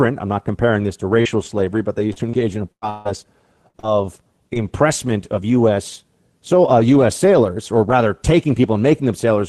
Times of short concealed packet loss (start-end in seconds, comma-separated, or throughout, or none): 1.21-1.28, 3.80-3.86